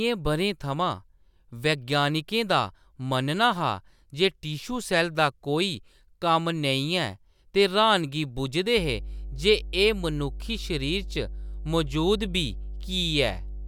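From 8.77 s to the end of the speech, mains hum appears: a steady 50 Hz tone, roughly 10 dB below the signal, from power-line coupling such as a ground loop. It sounds like a low drone under the voice, showing as a bright horizontal line at 50 Hz on a spectrogram.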